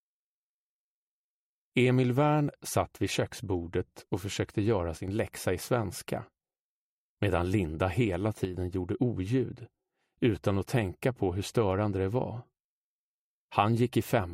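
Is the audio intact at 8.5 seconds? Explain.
No. From 8.45 to 8.54 s the level suddenly dips by about 6 dB, likely one channel dropping out, so only half the shared signal survives the mono sum.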